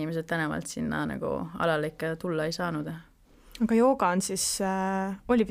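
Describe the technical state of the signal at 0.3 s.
At 0.3 s the speech signal is intact, with no audible dropout, clipping, distortion or other fault at that point.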